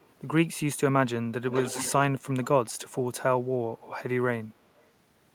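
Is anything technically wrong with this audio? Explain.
Yes. An echo leak occurs at 0.0–0.08 s, 1.49–1.93 s and 4.81–4.86 s. A copy of the speech returns 219 ms late. It is faint in the first and last events and fairly loud in the middle one. The likely cause is an echo canceller on a loudspeaker end letting it through.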